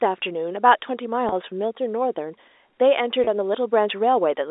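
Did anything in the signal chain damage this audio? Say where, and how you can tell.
Yes. The damage is in the network stage: packet loss with pitch repetition at 1.29 s and 3.24 s, each gap about 30 ms, which fits a single lost packet. Each sounds like a brief held, buzzy tone because the receiver repeated the last pitch period to cover the gap, over a G.711 telephone-band line.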